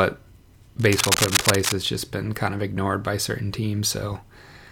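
From 0.79 to 1.72 s, just before "has just been kind", cable scratch noise runs over the speech. Dense, uneven bursts of scratching sit about as loud as the speech itself. The likely cause is a worn cable or connector being moved, its contact resistance jumping rapidly.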